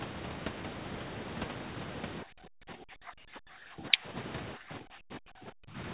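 A speech recording, band-limited to 4 kHz as a G.711 A-law call path would leave it. The room sound is cut away three times by background gating from the echo canceller: 2.24 to 2.79 s, 3.40 to 3.51 s, and 4.56 to 5.76 s. The drops reach about 36, 40 and 37 dB. The canceller clamps the microphone while far-end audio plays, then releases it. From 3.79 to 3.98 s the voice itself dips by roughly 15 dB. This is speech suppressed in double talk, likely because the canceller mistook the talker for echo while both sides spoke.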